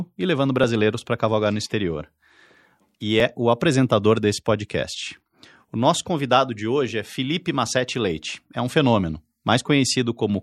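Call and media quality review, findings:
Dropped buffer (overrun) at 3.20 s, just before "o apresentador desse podcast". Symptom: a small forward jump in the speech, no silence. Likely cause: the capture path did not read its buffer in time, so a few milliseconds were overwritten and the surrounding audio was joined directly. Waveform: abrupt step discontinuity, no flat section. Spectrogram: thin broadband vertical line at the join.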